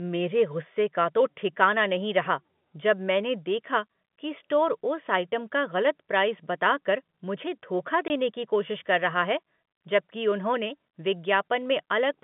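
At 8.08 to 8.10 s, packet loss filled with silence cuts a 20 ms hole in the speech, consistent with one dropped packet. On the waveform it is a flat gap with abrupt edges, and on the spectrogram a thin vertical blank.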